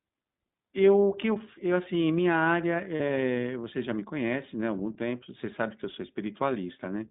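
Throughout, the speech runs through the iLBC codec. It is band-limited to roughly 150 Hz to 3.7 kHz, with a plainly audible rough, synthetic edge that fits its 20 ms, 15.2 kbps mode. A spectrogram shows nothing above 3.7 kHz.

From 2.96 to 3.01 s, lost iLBC frames leave a 40 ms gap, which fits two missing frames. The decoder fills it by repeating the last pitch cycle mixed with noise, so it sounds like a brief buzzy held vowel. On the waveform this shows as a short run of repeating periods, and normal speech returns immediately after.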